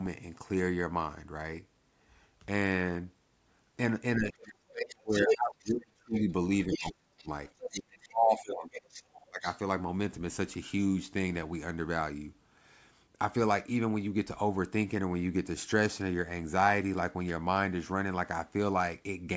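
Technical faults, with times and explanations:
4.17–6.29 s, 6.67–7.27 s, 7.70–8.98 s and 9.29–9.46 s, speech suppressed in double talk: the talker's speech sinks sharply while a second voice is present, by roughly 30 dB in the first stretch and about 40 dB at its deepest around 7 s, with the last dip brief and shallower. The likely cause is the echo canceller failing to tell the near talker from loudspeaker echo and attenuating everything while both sides spoke.
5.11–5.70 s, 6.14–6.21 s, 6.71–8.08 s and 8.45–9.45 s, other side's voice leaking through: a second voice is audible under and around the talker. In the first stretch it is roughly 5 dB louder than the talker's speech. The later scraps sit well below it, down to about 20 dB quieter. This is likely loudspeaker playback of the far end reaching the microphone and surviving the echo canceller's subtraction.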